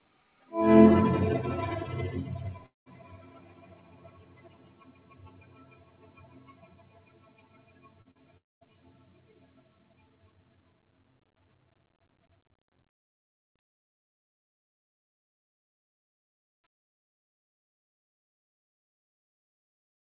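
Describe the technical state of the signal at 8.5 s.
Between about 8.37 and 8.63 s the sound breaks off. A short, fading buzz-like continuation of the last sound gives way to near silence lasting about 0.22 s. When the sound resumes at 8.63 s, roughly 0.24 s of material has simply vanished rather than being delayed. This is likely a long network dropout: no audio packets arrived for that stretch, and the receiver briefly extended the previous sound before falling silent.

Around the same moment the sound also pumps and thins. Sustained parts and decaying tails are pulled down while onsets pass through, with the level swinging by about 20 dB. This is a noise suppressor designed for speech applied to music or sounds. It treats steady tones and reverberant tails as background noise and attenuates them. All of this sits inside the narrow call-codec band, with nothing above 4 kHz.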